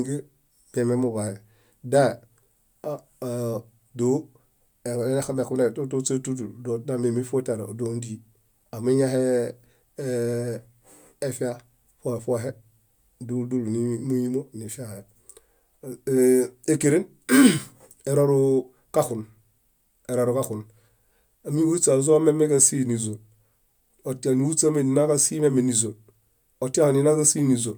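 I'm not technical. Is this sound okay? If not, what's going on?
Yes, this one's fine: nothing in the recording jumps out as a problem, so you can relax about it.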